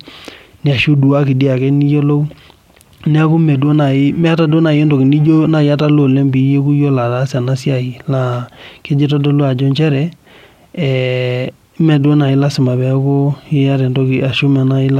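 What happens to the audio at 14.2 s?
Nothing goes wrong at 14.2 s; the speech carries on intact through that moment with no dropout, click or distortion.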